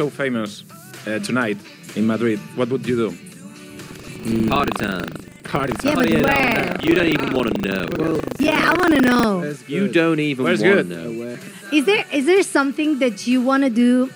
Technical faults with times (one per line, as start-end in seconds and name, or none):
3.84-9.24 buffer tearing